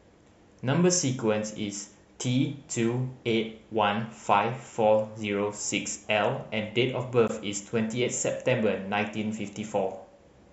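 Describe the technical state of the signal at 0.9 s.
At 0.9 s the speech signal is intact, with no dropout, distortion or other fault audible at that moment.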